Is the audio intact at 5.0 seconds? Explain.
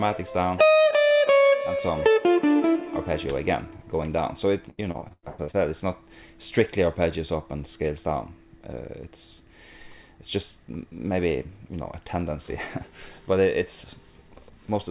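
No. From 4.70 to 5.56 s the sound turns choppy and robotic, with pieces missing. This is repeated packet loss: eight gaps, the longest 97 ms, each patched by continuing the previous sound, so about 45% of that stretch is concealment.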